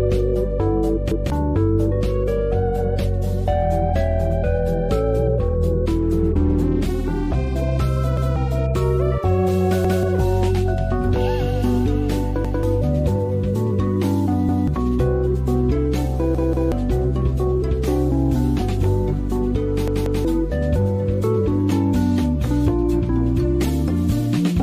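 Repeated buffer stutters at 1.12, 8.17, 9.85, 12.45 and 14.49 s, with double repeats at 16.35 and 19.88 s. Each time, late audio made playback loop the same 0.19 s chunk, which fits an 8192-sample buffer, with a hard join.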